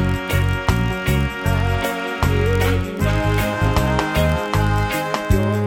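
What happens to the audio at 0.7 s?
Block size mismatch (padded) is present at 0.7 s and throughout. Each block ends in a brief zero-filled gap, causing a 43.1 Hz buzz that points to 1024-sample reads.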